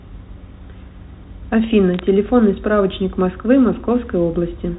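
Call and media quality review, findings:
Bit errors on a digital phone line, 1.94–1.99 s: a short burst of sharp ticks and light crackle over speech that continues unchanged underneath. Probable component: the digital transport of the G.711 mu-law stream, whose 4 kHz band limit fits a 64 kbit/s line. Mechanism: flipped bits, roughly one or two per thousand, each corrupting a single sample. Hits on the sign or high bits give the loudest ticks. Distinguishing: unlike packet loss, there are no dropouts, muting or concealment smear. Unlike clipping, the waveform is unaltered between ticks.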